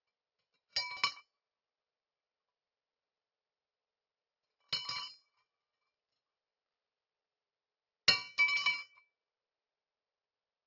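Sounds, downsampled throughout without an anti-aliasing filter, consistent with a drop to a 12 kHz rate, causing aliasing: content above 6 kHz folds back as gritty, metallic tones roughly as loud as the genuine sound.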